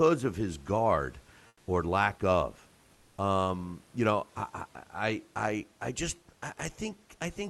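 At 1.47 to 1.67 s, after "of his guard", and at 2.93 to 3.17 s, after "guard or lack of", comfort noise replaces the background. The room noise turns flat and featureless, about 4 dB and 3 dB quieter. Likely cause: discontinuous transmission in the Opus call path.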